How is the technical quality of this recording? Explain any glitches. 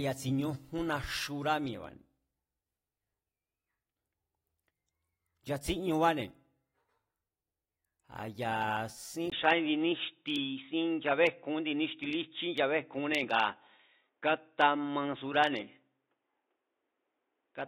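The recording has one clear fault: at 9.30 s, just after "ya sín", the sound turns dull and boxy and stays that way to the end. This fits an input switched to a poorer device, likely a change to another microphone or a headset's call profile, which passes a narrower band. A spectrogram would show everything above 3.8 kHz cut off from that point, after a 20 ms gap in the waveform. The level also shifts by about 5 dB, and a faint new noise floor sits well below the speech.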